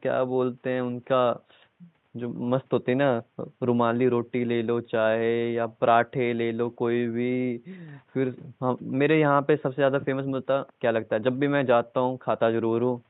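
Nothing in this speech recording points to a technical fault, and the faint room background sitting about 45 dB below the talking is simply part of where it was recorded.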